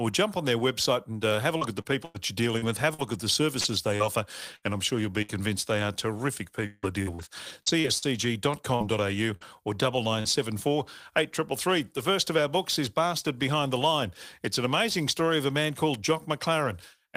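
Packets went missing repeatedly, with each hole patched by stretching the previous sound, causing repeated packet loss (robotic sound): choppy speech with pieces missing from 1.57 to 5.31 s after "and uh have a", nine gaps up to 96 ms, and again from 6.66 to 10.26 s after "they are terrific", nine gaps up to 164 ms.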